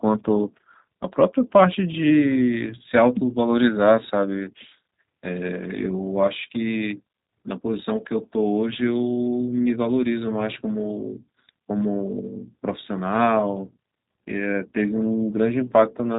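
From start to finish the speech carries G.729 codec damage, plainly audible. The band stops near 3.8 kHz, so sibilants lose their edge and the sound is muffled and narrow. Each 10 ms frame is rebuilt from a vocal tract filter, a pitch predictor and a handful of pulses rather than the actual waveform, which gives the voice a rough, buzzy, synthetic grain. This fits G.729A at 8 kbit/s.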